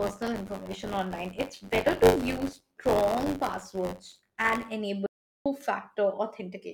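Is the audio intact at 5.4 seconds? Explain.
No, 5.4 s falls inside an audio dropout to silence from 5.06 to 5.46 s: the speech cuts to dead silence, likely a lost input link.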